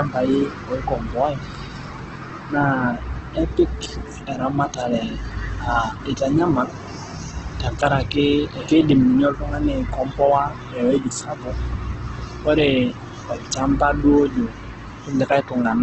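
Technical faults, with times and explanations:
Throughout, Opus compression. The speech sounds rough and grainy, with a noisy texture where clean tones should be. Nothing is heard above about 8.4 kHz, so the top end is dull. This is likely Opus in its music (CELT) mode, starved of bits. The damage is heavy, which fits a rate near 12 kbps. Short of bits, the encoder fills bands with folded copies or noise, so detail turns to grit.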